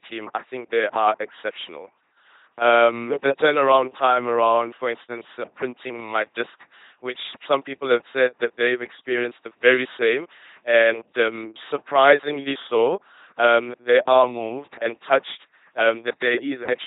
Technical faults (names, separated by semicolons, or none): LPC-10 vocoder